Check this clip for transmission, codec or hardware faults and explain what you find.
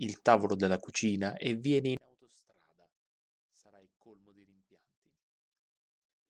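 One fault is present. From 1.97 s to the end, the speech drops by about 35 dB to a faint residue. The likely cause is one channel inverted: reversed polarity cancels the shared centre content when the channels are summed. The waveform collapses to near-flat, and the spectrogram fades to weak traces.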